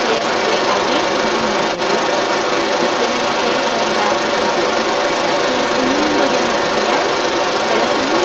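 From 0 to 8 s, a second voice runs under the speech throughout, at a level comparable to or slightly above the main talker. This is the other side's voice leaking through. The likely cause is that the far-end audio played on the talker's loudspeaker reached the microphone and the echo canceller failed to remove it. The leaked voice competes directly with the speech, and both sit within the call path's band, which stops at 8 kHz.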